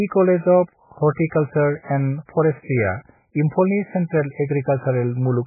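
Throughout the speech, the audio was likely squeezed through heavy MP3 compression. The encoder, starved of bits, cut everything above 2.5 kHz and dropped weaker spectral lines frame by frame, which fits roughly 8 kbps, leaving a muffled, watery, swirling sound with smeared attacks.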